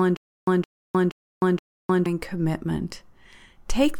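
From the start to 2.06 s, stutter with silent gaps: a 166 ms burst repeats four times every 473 ms, separated by 307 ms of digital silence, likely a stalled stream replaying its last fragment.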